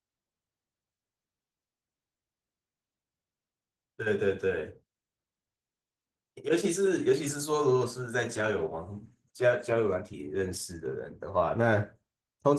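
Opus voice compression runs throughout the speech. The coder appears to split the band, with linear-prediction coding below 8 kHz and a coarse transform layer above it, at a low rate that points to roughly 16 kbps. It leaves the voice plainly hoarse and slightly robotic.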